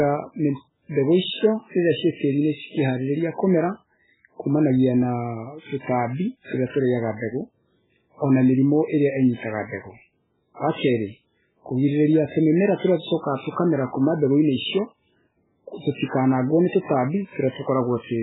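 From start to finish the speech sounds watery and swirly, with nothing at all above 3.8 kHz, so s sounds lose their edge and go smeared and chirpy. That's most likely heavy MP3 compression: starved of bits, the encoder lops off the treble at a fixed point and drops the weaker frequency lines, which then flicker in and out frame to frame. The damage is severe enough to point to a very low bitrate, somewhere around 8 kbps.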